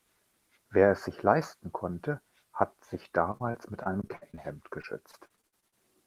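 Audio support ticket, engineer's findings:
Repeated packet loss (robotic sound), 3.31–4.40 s, right after "leisten konnte hat sich": network/jitter buffer dropping or late-delivering packets. Concealment extends the last audio across 8 gaps, about 200 ms total, longest 56 ms, roughly a fifth of the span. Speech choppy.

Repeated packet loss, 4.82–5.74 s: same transport fault recurring. 8 concealed gaps, about 220 ms, longest 52 ms, about 22% of the span. Choppy, clipped fragments with pieces missing.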